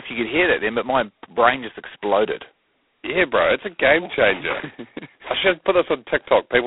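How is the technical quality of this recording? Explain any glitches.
The quality is poor: the whole clip is heavily degraded telephone-band speech. Throughout, G.726 ADPCM coding squeezes the line band of 300 Hz to 3.5 kHz into very few bits per sample, which fits 16 kbit/s. It codes only the error from a running prediction, so coarse steps leave a harsh, rasping hiss that rises and falls with the speech. A spectrogram shows nothing above 3.9 kHz and grainy noise filling the band under each syllable.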